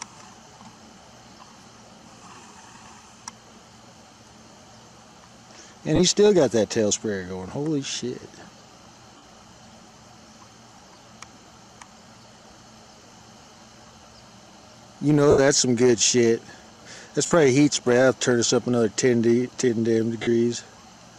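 Lost LE Audio frames: the decoder patched each gap with the last spectrum and randomised signs, smearing sound into noise at 5.96, 9.17, 15.3, 17.26 and 20.22 s, lasting 30 to 75 ms.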